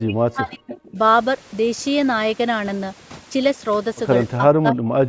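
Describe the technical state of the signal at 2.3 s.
At 2.3 s the speech carries overdone noise removal, present throughout the clip. Noise reduction set too strong shuts off individual frequency bands near its noise estimate, taking quiet speech detail too. The background drops and breaks up into twinkling specks. The call filtering leaves nothing above 8 kHz, which is normal.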